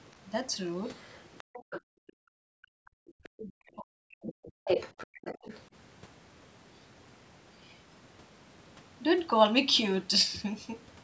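A speech recording from a call, with content only up to 8 kHz. A second, quieter voice is heard under the talker from 0.96 to 1.81 s, at 2.07 s, 2.86 s, 3.23 to 3.42 s, and 4.27 to 5.61 s. This is likely the other side's voice leaking through from the loudspeaker, missed by the echo canceller. In the last stretch it is nearly as loud as the talker. From 1.81 to 3.14 s the room sound dips and drops out, by up to about 40 dB. This is background gated by the echo canceller, which clamped the microphone while the far end played. From 3.42 to 4.49 s the talker's own speech sinks hard, by roughly 40 dB at worst. This is likely speech suppressed in double talk, with both sides talking at once and the canceller turning everything down.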